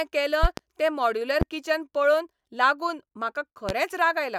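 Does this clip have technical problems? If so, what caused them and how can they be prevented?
Yes. Loud pops sit on top of the speech at 0.43 to 0.61 s (a double pop), 1.41 to 1.45 s and 3.69 to 3.73 s. Each peaks at about 15 dB above the speech, which continues underneath. The likely cause is an electrical transient, such as a connector being disturbed, a switch, a static discharge or a driver glitch, injecting a voltage step that the following circuitry turns into a sharp thump. Securing cables, muting before switching and grounding against static prevent it.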